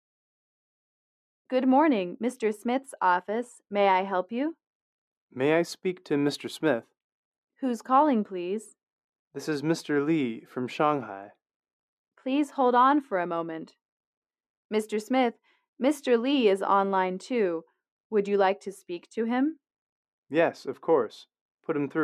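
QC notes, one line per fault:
Nothing here needs flagging; I didn't hear a single problem anywhere in the clip.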